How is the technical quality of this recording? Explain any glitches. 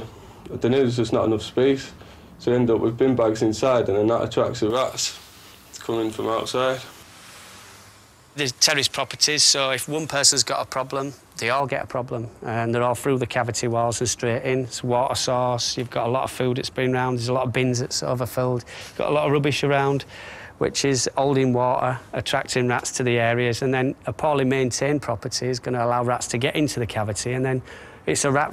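There is one glitch. Pre-emphasis left on, 4.70 to 11.60 s: a treble boost added before recording or transmission was never reversed by the matching de-emphasis, in a shape that fits the J.17 curve. At 10 kHz the top end sits about 11 dB above 1 kHz, so the sound turns thin, bright and sharply sibilant.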